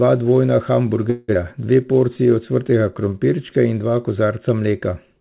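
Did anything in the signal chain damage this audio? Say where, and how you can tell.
Yes, at the network and the jitter buffer. From 1.1 to 1.37 s there's a long network dropout: the sound carries on as a buzzy, fading smear for about 0.25 s, then resumes with roughly 140 ms of material simply gone. That's packet loss concealment stretching the last good audio while nothing arrived. The stall was likely a burst of lost packets, and the buffer seems to have come out of it holding roughly 50 ms more delay.

Right after that, from 1.87 to 3.15 s, the jitter buffer slow-down kicks in. Playback runs at about 90% speed with the pitch unchanged, so everything sounds drawn out, up until "in dva". The receiver was rebuilding its reserve by repeating individual pitch periods and slivers of pauses, adding around 131 ms in total. All of this rides on a G.711 mu-law path at 64 kbps, which is why nothing reaches above 4 kHz.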